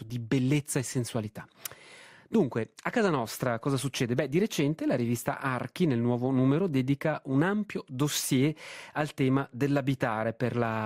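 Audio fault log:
No audible faults detected.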